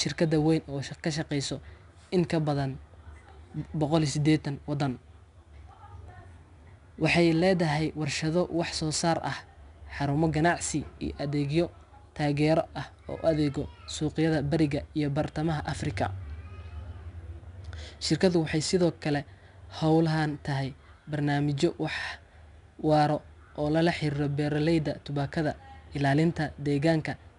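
Speech throughout, and the whole thing carries 4-bit ADPCM compression. Each sample is coded as a coarse 4-bit step from a prediction, so the error rides along with the level: you get a gritty hiss under every loud syllable, and sharp onsets smear where the step size can't catch up. Nothing survives above 10.6 kHz, which points to a reduced sample rate, and the damage is plainly audible, consistent with about 88 kbps.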